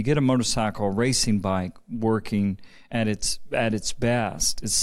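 From 0.15 s to 4.73 s, faint ticks recur about every third of a second, some twenty of them, most audible on louder speech. These are clock slip clicks, likely from two unsynchronised clocks drifting by around 100 ppm, each slip dropping or repeating one sample.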